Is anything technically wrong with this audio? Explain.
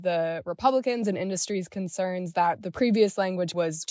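No, no technical faults are present.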